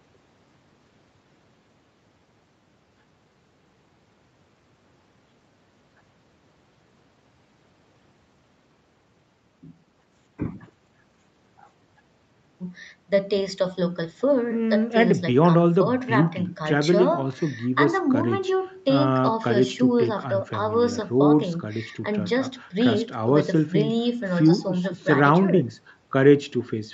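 Nothing in this speech recording is technically wrong. Nothing reaches above about 8 kHz, which fits the bandwidth of the call's microphone processing and codec path, both working as they should.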